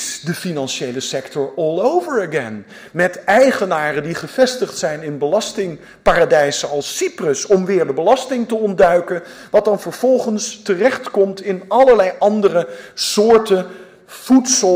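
Throughout the clip, the sample rate was raised by joining samples with straight lines, which points to a doubling from 24 kHz to 48 kHz. This imaging from linear upsampling dulls the top of the original band and leaves a mirrored copy between 12 and 24 kHz, roughly 30 dB down, heard as a metallic shimmer on high-frequency content.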